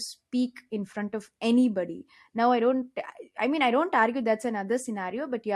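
No technical faults can be heard in this speech recording.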